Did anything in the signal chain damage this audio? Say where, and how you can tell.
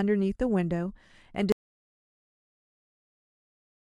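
Yes. The speech stops abruptly at 1.52 s and never returns. From there to the end the file holds silence, with no room tone or noise floor at all. That is an audio dropout to silence. The recorder kept writing silence after its input vanished. The stage is the capture side, ahead of the converter's output. The likely cause is a disconnected input device, a failed link or a mute switched on mid-recording.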